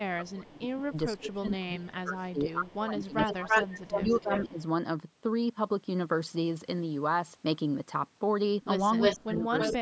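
Speech recorded through a call's microphone processing, with the band ending at 8 kHz, shows two faults. When both ends talked at once, the echo canceller likely failed to tell the local talker from loudspeaker echo and turned everything down. That is speech suppressed in double talk: from 0.17 to 4.58 s the voice dips and breaks up for roughly three seconds in total, falling by about 25 dB at worst, and again from 9.16 to 9.81 s, dropping by about 30 dB. One side also likely let loudspeaker sound back into its microphone uncancelled, causing echo leak. A delayed copy of the voice returns at 425 ms, faintly from 0.29 to 0.33 s (about 35 dB down) and from 1.18 to 1.51 s (about 20 dB down), then at 325 ms from 3.17 to 4.62 s at about the same level as the speech and from 8.99 to 9.76 s about 5 dB louder than it.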